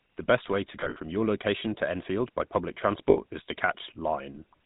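The whole recording runs through the GSM full-rate codec. The codec rebuilds speech from a vocal-tract model excited by a sparse, regularly spaced pulse train, at a rate that fits 13 kbps. Nothing above 4 kHz survives, so the speech is dull and band-limited, with a plainly audible buzzy, gravelly grain.

Between 0.8 and 0.97 s, lost GSM frames break the signal. The decoder had to patch the gaps by reusing the last good frame's parameters. About 100 ms is missing, scattered over 160 ms, with the longest stretch about 70 ms, which points to roughly five frames. Each gap is heard as a brief, rough metallic ring smeared over the speech.

A second loss from 3.1 to 3.18 s covers 60 ms, which fits three frames. It gives a shorter version of the same ringing, held tone.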